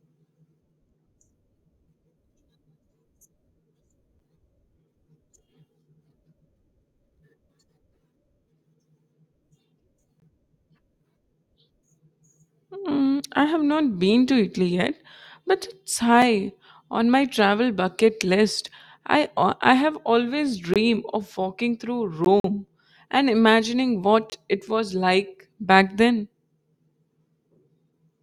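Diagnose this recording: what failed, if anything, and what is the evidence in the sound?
Short hard-edged holes interrupt the speech at 4.19, 10.2, 16.22 and 22.25 s, spaced almost exactly 6 s apart. They are brief: about 7, 20, 4 and 15 ms. This is a gap between stream segments at the network or playback stage. The speech arrives in 6 s segments whose timestamps do not quite meet, and the player inserts silence to cover each mismatch. Nothing is lost. The sound simply pauses and resumes.

Three blocks of digital silence appear late in the clip, at 20.74–20.76 s, 22.40–22.44 s and 24.30–24.32 s. The sound drops abruptly to nothing and returns with no fade. The first and last holes are about 21 ms long and the middle one about 43 ms, so they come across as short pops or dropouts. The fault is at the driver or buffer stage, where output buffers went unfilled in time and were sent as zeros. 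The lengths fit one and two 1024-sample buffers at 48 kHz.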